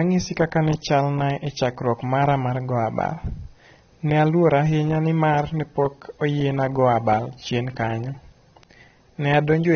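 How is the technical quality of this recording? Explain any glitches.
The recording is noticeably degraded throughout by AAC compression damage. Nothing reaches above 6.3 kHz, so the speech sounds dull and smeared, with a warbling texture on sustained sounds and sibilants. That texture sets it apart from a plain low-pass filter. The audible quantisation of each frame's spectrum points to a heavily compressed AAC-LC encode, likely at a low bitrate of about 24 kbps.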